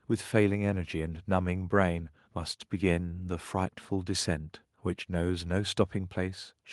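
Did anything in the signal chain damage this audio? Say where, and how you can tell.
No, nothing in the chain damaged it.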